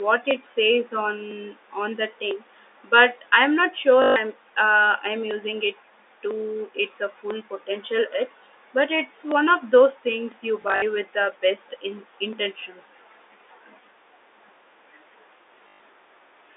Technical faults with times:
0.31-16.33 periodic USB or driver dropouts
4.02-4.16 packet loss with last packet repeated
10.62-10.82 packet loss with last packet repeated
15.68-15.80 packet loss with last packet repeated

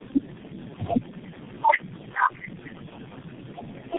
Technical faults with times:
0.00-3.98 tandem speech coding

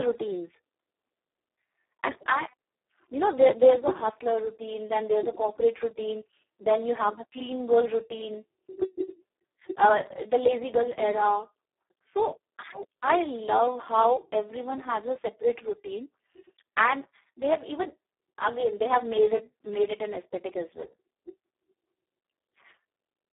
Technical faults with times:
0.00-23.33 Speex codec

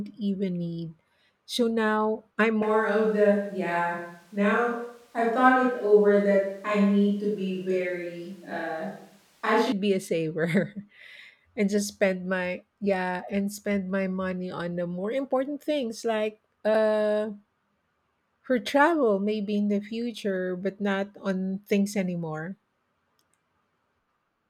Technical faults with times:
2.63-9.72 switch to a distant microphone

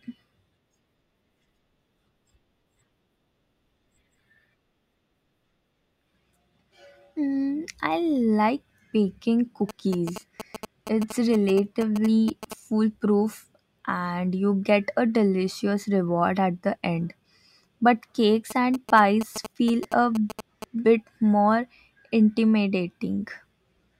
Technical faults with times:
9.69-12.53 GSM signalling bursts
18.50-20.64 GSM signalling bursts

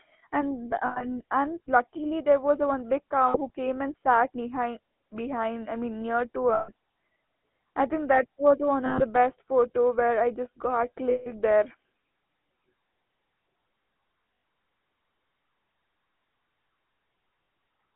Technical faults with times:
0.00-17.96 GSM full-rate codec
0.86-1.05 lost GSM frames
3.28-3.50 lost GSM frames
6.54-6.69 lost GSM frames
8.86-9.03 lost GSM frames
11.10-11.31 lost GSM frames
14.34-14.44 lost GSM frames
17.44-17.48 lost GSM frames

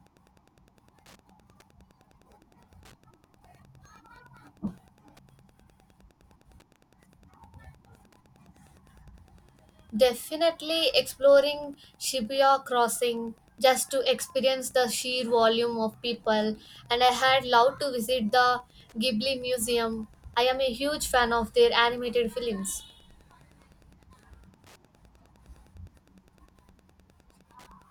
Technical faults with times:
0.00-27.91 Wi-Fi interference

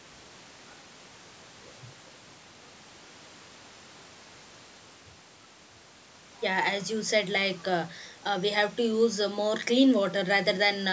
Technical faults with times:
none

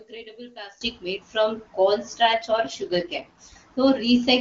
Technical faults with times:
0.00-0.81 one channel inverted
2.32-3.56 AMR rate drop

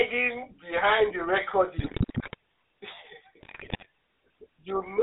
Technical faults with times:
0.00-5.02 GSM full-rate codec
1.78-2.34 GSM bit errors
3.40-3.86 GSM bit errors

